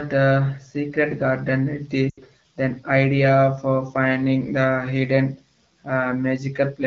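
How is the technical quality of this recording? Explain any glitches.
The recording has one clear glitch, a dropout from lost AMR speech frames at 2.09 to 2.20 s. It falls between "uh secret garden" and "then idea for finding". Radio errors corrupted the speech frames so they failed their checksum. The decoder then concealed the gap by repeating the last good pitch and vocal tract settings while ramping the gain down. The result is about 80 ms of lost speech that drops to near silence within two frames, consistent with roughly four consecutive lost frames. Speech resumes briefly weak before settling. The HD Voice wideband coding sounds clear, which fits a rate around 12.65 kbit/s.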